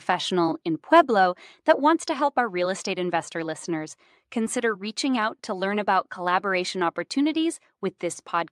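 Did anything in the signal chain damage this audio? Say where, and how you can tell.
Yes, two kinds of damage, both up at the capture end. First, microphone overload at 0.96 to 1.00 s and again at 1.70 to 1.72 s. You hear a short harsh, crackly edge on those loud syllables, pushing about 1 dB past full scale with a few percent of samples flattened. That's the converter running out of headroom, likely because the mic input gain was set too hot, so the waveform tops get sheared off.

Second, the microphone volume stepped down, once at 1.02 s and again at 2.04 s, each a sudden drop of about 2 dB in both the speech and the room behind it. The first comes right after the 0.96 s peak, which gives it away. This is likely the call software's gain control spotting clipping and knocking the device input level down in one jump rather than easing it, so you get a step instead of a smooth fade.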